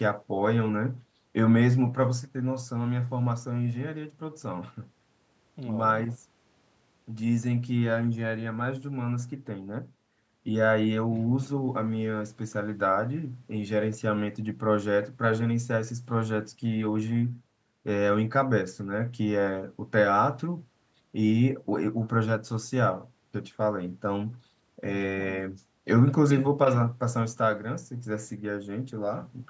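No faults are audible in this speech; the call's microphone processing is working as it should, its high-pass trimming the lowest bass and the band topping out at 8 kHz.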